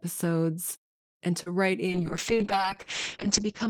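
At 1.43 s, a short concealed packet loss occurs. About 20 ms of the call arrived too late, and the receiver filled roughly 28 ms by extending the preceding sound before blending back. It is heard as a brief smear or wobble through 1.48 s.

From 1.87 s to the end, a call bitrate drop sets in. The encoder falls from 48 kbps to 7 kbps, staying lowest for 1.33 s. Bandwidth narrows from 20 kHz to 8 kHz. The speech turns coarse, watery and muffled.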